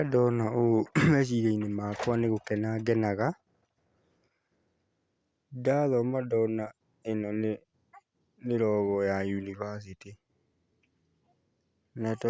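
Nothing stood out as a technical fault on listening to this speech recording.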